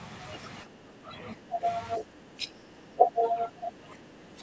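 From 0.64 to 1.67 s and again from 1.97 s to the end, the speech sinks by up to about 10 and then about 15 dB, most likely speech suppressed in double talk.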